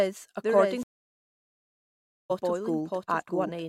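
Throughout the clip there is a doubled audio track, likely from a second, slower capture path mixing the same speech in again. A full-band copy trails about 0.7 s behind, roughly 5 dB quieter, with no decay or room colour.

At 0.83 s a stream reconnect occurs: the connection dropped and a fresh decoder started mid-stream. Silence lasts about 1.47 s until 2.31 s, and the speech resumes roughly 1.5 s further on, skipping that stretch.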